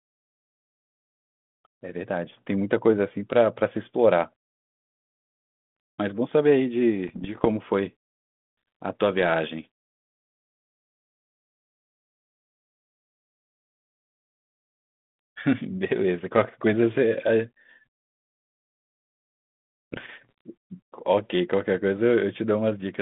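Bit errors on an ADPCM link hit this telephone-band speech from 7.08 to 7.47 s and from 19.92 to 20.41 s, at a rate well under one percent. Each flipped bit throws the decoder's step size and predictor off, so pops ring on as rough bursts with brief level jumps over the narrow band of about 150 Hz to 3.5 kHz, consistent with 32 kbit/s G.726.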